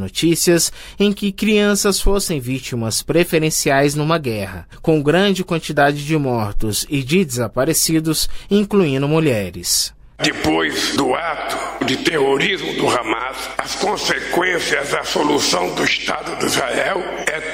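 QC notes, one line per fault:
Throughout, mains hum: a steady low tone at 50 Hz sits under the whole clip, about 30 dB below the signal, as the power line couples into the path. A spectrogram shows a thin unbroken horizontal line at 50 Hz, with some low harmonics above it.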